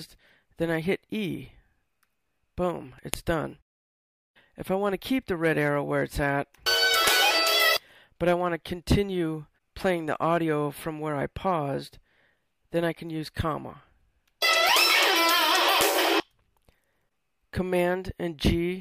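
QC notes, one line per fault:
3.14 s, 7.08 s and 15.81 s, file header played as audio: at each of these joins a sharp, loud snap cuts in, because the next piece's header bytes were read as sample values and played as a very short burst of arbitrary data. Unlike a splice click from a waveform discontinuity, its loudness has nothing to do with the surrounding signal, and each snap falls exactly at the start of a new piece rather than at random.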